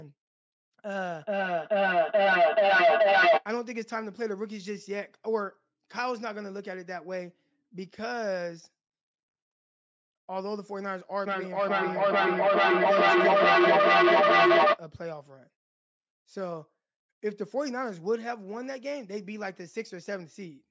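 From 1.16 to 3.47 s and again from 11.26 to 14.83 s, the speech is caught in a feedback echo between two devices. One device replays what the other's microphone sent, that microphone picks it up again, and neither echo canceller removes the other's playback. The speech returns roughly every 400 ms, thinner and more ringing each pass. Unlike a single fading echo, these repeats build up, peaking at about 12 dB and 11 dB above the speech.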